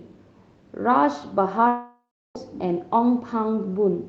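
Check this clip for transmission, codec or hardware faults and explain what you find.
One fault stands out: a long network dropout from 1.67 to 2.37 s. The Opus call path can be heard as a band limit at 8 kHz.

At 1.67 s the speech stops being delivered, most likely because packets were lost for about 0.68 s. The receiver stretches the last sound into a fading buzz, leaves roughly 0.33 s of silence, and resumes at 2.37 s with the missing stretch gone. On a spectrogram this shows as smeared, flattened harmonics dimming into an empty band. The waveform shows a shrinking envelope and then a flat line.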